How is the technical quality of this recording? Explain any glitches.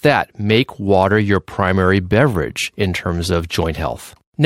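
Technically sound, with no glitches or faults audible anywhere in the recording.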